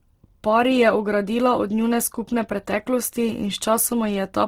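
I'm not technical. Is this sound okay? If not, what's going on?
No. From start to finish the speech sounds grainy and rough, with a clearly audible noisy fizz. That points to heavy Opus compression, likely squeezing the file too hard.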